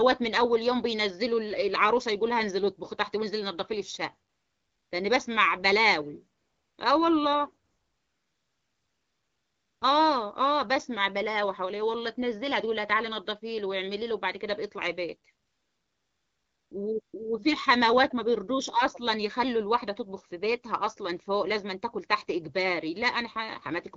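Five stretches of AMR comfort noise replace the real background: 4.29–4.91 s, 6.37–6.77 s, 7.65–9.81 s (the longest, about 2.2 s), 15.45–16.71 s and a brief 17.01–17.13 s. In each, the sending side judged the line silent and stopped transmitting speech frames, so the receiver synthesised a smooth, steady hiss from a rough level-and-spectrum estimate. The texture audibly switches at each boundary.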